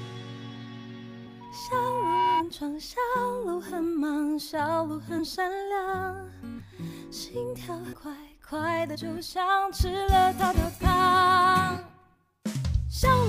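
Compressed frames skipped at 1.26 s: about ten whole frames of roughly 23 ms each never reach the output, so the audio leaps ahead by around 300 ms. The overlapping frames blur the join into a short smeared blip, not a click.

Loudspeaker feedback squeal from 1.40 to 2.45 s: the microphone hears its own loudspeaker, and at 965 Hz the loop gain tops one. That tone builds for roughly 0.7 s into a squeal about 5 dB above the sound.

More frames are skipped at 5.18 to 5.20 s (about 70 ms), 7.92 s (about 200 ms) and 8.94 to 8.96 s (about 70 ms), each heard as the same brief smeared jump.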